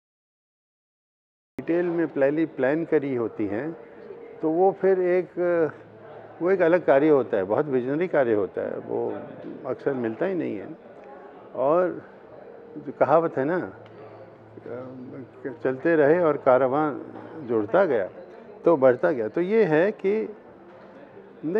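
A cut-off start opens the clip: from 0.0 to 1.59 s there is only digital silence, and at 1.59 s the audio switches on abruptly in the middle of a sound rather than rising into it. Capture evidently began after the sound was already under way, so the material before that point was never recorded. The result is a hard edge with no natural attack or fade-in, as if the sound had been sliced open partway through.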